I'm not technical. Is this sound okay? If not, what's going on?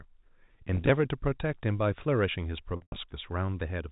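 No. There is packet loss with pitch repetition at 0.75 to 0.89 s and at 2.76 to 2.96 s. Chunks of the speech went missing in transit, and the receiver patched each gap by repeating the last stretch of voice. The first patch covers short scattered losses and sounds like a brief buzzy hold. The second includes a 100 ms run, so the voice stretches and fades before returning. A plain dropout would go abruptly silent instead.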